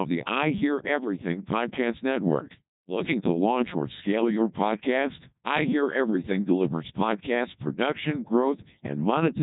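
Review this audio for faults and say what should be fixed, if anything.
The speech passes through a Codec 2 vocoder throughout. It sounds robotic and buzzy. The heavy damage fits a rate near 1.2 kbit/s. Only pitch, voicing, energy and envelope survive, rebuilt from sine waves. Nothing reaches above 3.8 kHz. Use a higher-rate waveform codec instead.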